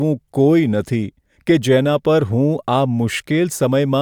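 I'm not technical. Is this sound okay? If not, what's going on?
Yes, nothing wrong can be heard in this recording.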